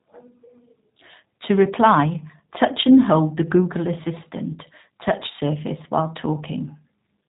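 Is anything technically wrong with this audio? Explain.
Yes. The whole clip carries plainly audible G.729 codec damage. This codec models speech as a vocal tract filter and a pitch predictor, with only a few pulses in each short frame. Nothing above 4 kHz survives, so the speech sounds muffled and boxy. Fine detail is replaced by a coarse approximation, giving a rough, slightly synthetic buzz to the speech from start to finish. The heavy data reduction fits an 8 kbit/s G.729A stream.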